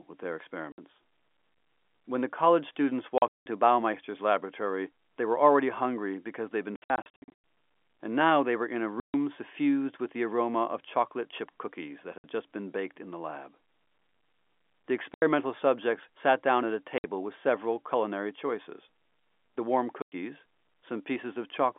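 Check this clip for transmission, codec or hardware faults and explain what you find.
One transmission fault runs through the clip: packet loss filled with silence, heard over a band-limited G.711 telephone line.

Packet loss filled with silence occurs at 0.72 s (60 ms, after "with their"), 3.18–3.46 s, 6.76–7.32 s, 9.0 s (140 ms, between "they were in a" and "suffused with the aroma"), 12.18 s, 15.14 s, 16.98 s (between "sat down at a" and "with several culinary choices"), and 20.02 s. Lost packets are replaced by silence, so the speech drops out abruptly with hard edges. The gaps run in 20 ms steps, which fits 20 ms packets. The bursts at 3.18 s and 6.76 s are clusters of scattered holes, up to 180 ms long.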